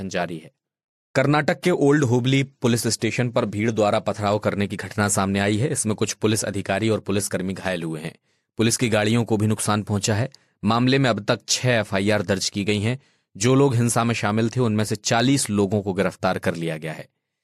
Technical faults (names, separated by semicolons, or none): none